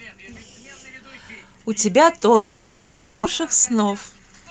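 From 2.35 to 3.27 s the last sound is carried forward as a fading buzz that never drops to true silence. It resumes with roughly 0.7 s of material missing. That jump forward marks a likely long network dropout rather than a brief concealed packet loss.

From 3.40 to 4.48 s a jitter buffer speed-up trims many tiny pitch-period slices, removing about 150 ms in total. The audio runs about 11% faster and sounds hurried, yet the pitch stays put, unlike a resampled speed change.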